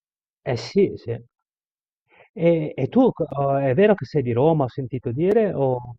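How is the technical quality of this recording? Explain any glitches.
The speech is interrupted by three brief dropouts, at 1.29 s, 3.31 s and 5.31 s. These are gaps between stream segments: at each 2-second segment boundary the timestamps left a small hole, and the player filled it with silence. The result is a hard-edged blank of about 13 ms, 7.4 ms and 4.9 ms respectively, with no audio lost.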